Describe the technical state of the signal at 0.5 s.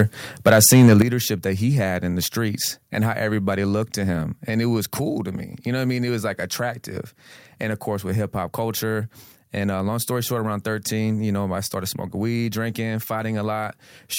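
At 0.5 s the speech has a harsh, crackling edge on its loudest syllables, with the tops of the peaks sounding squared off and gritty. This is microphone overload, running from 0.46 s to 1.02 s, just before "that he had in". The likely cause is an input level set too high, pushing peaks about 5 dB past the converter's ceiling so their tops are sheared off, affecting roughly 7 percent of samples.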